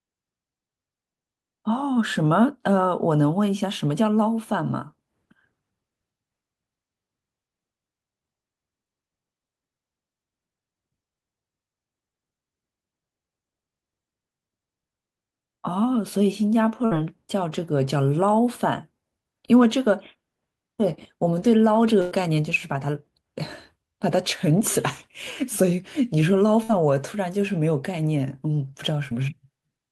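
At 16.85 to 16.93 s, 22.01 to 22.13 s and 26.63 to 26.71 s, bursts of packet loss drop about 60, 100 and 60 ms of speech. The receiver extends the last sound and fades it, giving a brief buzz or hiss before speech resumes further on.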